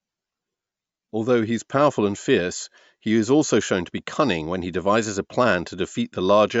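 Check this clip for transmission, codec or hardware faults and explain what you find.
No faults can be heard anywhere in this speech recording. There is nothing to report for any part of the clip.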